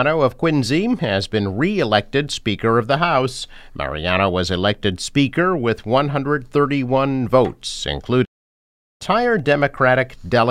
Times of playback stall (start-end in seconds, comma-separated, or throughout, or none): 8.24-9.02